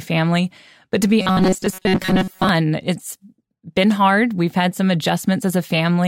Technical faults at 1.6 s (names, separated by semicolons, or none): robotic sound from repeated short buffers